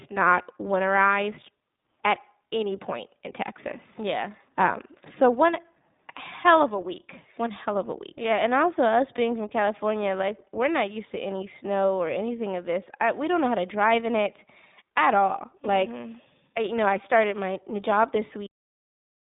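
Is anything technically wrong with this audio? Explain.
Yes. iLBC codec, throughout: the speech passes through a narrowband VoIP coder in 20 ms frames, which fits roughly 15 kbps. Nothing above 3.8 kHz survives, and the voice sounds plainly rough and synthetic.

Cut-off end, at 18.46 s, right after "started my new job": the final buffers never played, so the speech stops mid-sound into abrupt digital silence.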